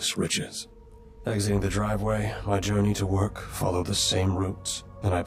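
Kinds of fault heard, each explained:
Channel delay (comb filtering): one channel lags the other by roughly 20 ms, so summing cancels at closely spaced frequencies from around 30 Hz, making the sound rough or slightly doubled throughout.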